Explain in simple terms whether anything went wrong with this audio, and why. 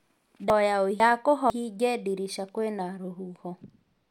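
Between 0.5 and 1.5 s the speech briefly sounds jumbled, as if a short stretch were said in the wrong sequence. This is chunks out of order. The audio was handled in half-second pieces, and one piece arrived a step late, so it played after the piece that should have followed it. Nothing is missing, but those two pieces are swapped, leaving three abrupt joins.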